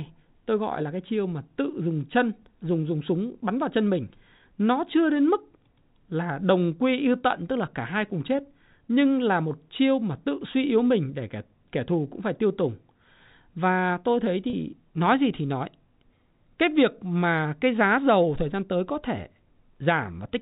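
Packets were dropped from the stream at 14.50 to 14.53 s in this speech recording, a gap of 30 ms that fits three 10 ms packets, and the receiver filled it through packet loss with pitch repetition, looping the last pitch period. The result is a brief, slightly held buzzy tone before the speech resumes. The narrowband telephone sound throughout comes from G.711 coding, which passes nothing above 4 kHz.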